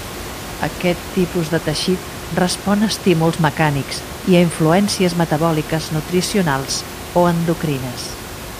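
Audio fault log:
No faults detected in the speech; the room's background noise sits about 13 dB below it, as expected for the recording space.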